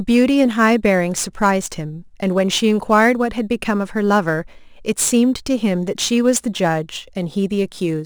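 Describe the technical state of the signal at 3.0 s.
At 3.0 s the speech carries crude rate conversion, present throughout the clip. The sample rate appears to have gone from 48 kHz to 44.1 kHz by dropping samples without filtering. This leaves inharmonic grit about 25 dB below the signal that fizzes along loud and high sounds.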